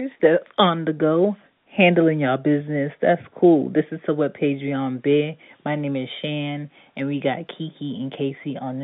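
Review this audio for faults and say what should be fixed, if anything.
Nothing here needs fixing: the speech sits in the ordinary 150 Hz to 3.6 kHz band of a fixed-line call, consistent with standard G.711 A-law telephone coding at 64 kbps, and that path is working as intended, with at most a faint trace of its level-following quantisation noise beneath the signal.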